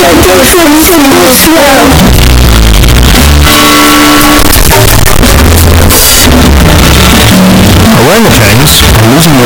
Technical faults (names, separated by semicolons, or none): signed and unsigned mixed up